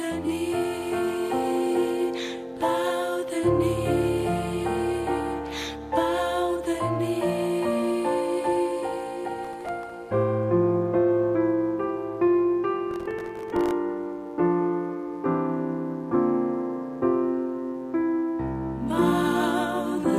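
Mains buzz runs from start to finish: sharp switching spikes twice per 60 Hz cycle leak in through a dimmer, rectifier or poor shielding, stacking harmonics into the kilohertz range. It sits roughly 35 dB below the sound as a steady, raspy buzz.

Processor overload crackle arrives at 9.45 to 9.90 s and again at 12.91 to 13.71 s. The processor repeatedly misses buffer deadlines, each missed slice dropping to silence with hard edges, which fits buffers of around 1.5 ms. About ten gaps in the first burst and a few dozen in the second produce gritty, tearing crackle over the sound.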